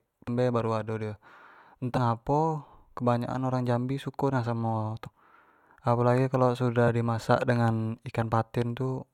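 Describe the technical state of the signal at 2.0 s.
Right around there, from 1.96 to 1.98 s, there's damaged data in the compressed stream: the decoder loses sync, hunts for the next frame header, and spits out a quick chirp, squawk, click or short hole.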